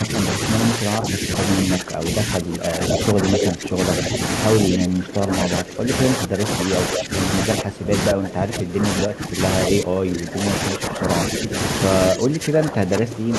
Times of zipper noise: none

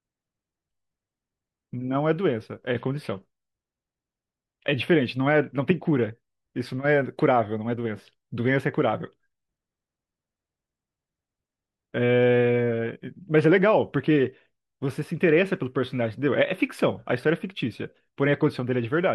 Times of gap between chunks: none

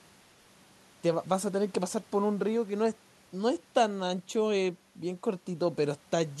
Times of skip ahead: none

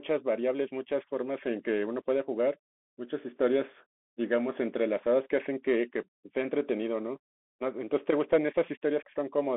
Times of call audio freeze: none

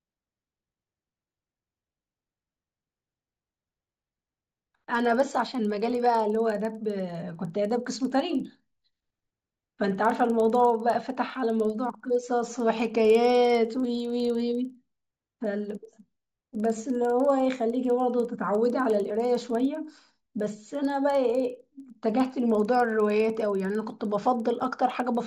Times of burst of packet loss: none

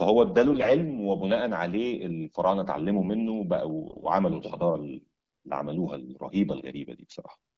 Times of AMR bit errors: 0.52-0.71, 3.87-4.06

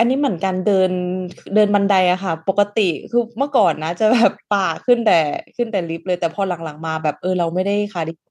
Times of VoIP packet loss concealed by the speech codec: none

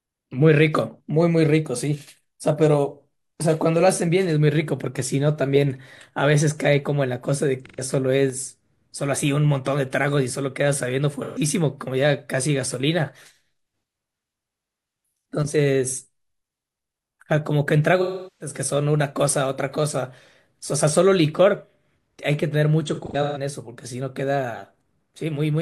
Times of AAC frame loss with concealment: 7.65-7.81, 11.23-11.39, 18.01-18.55, 22.88-23.38

